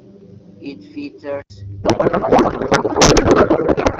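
From the start to 1.5 s, the speech sounds like it is coming through a poorer device. The likely cause is an input switched to a poorer device. Nothing reaches above 7 kHz, so the top end is dull. A faint new background hiss sits about 35 dB under the speech. The overall level barely changes. At the switch near 1.5 s there is a short gap of about 80 ms, and then the fuller sound returns.

From 1.83 s to the end, the speech gives way to garbled noise and warble. This is a codec payload misread. The AMR-WB stream at 12.65 kbit/s was packed in octet-aligned form but decoded as bandwidth-efficient. The decoder therefore reads every field from the wrong bit position. The frames still decode, but into nonsense that hardly follows the speech. It does not recover before the clip ends.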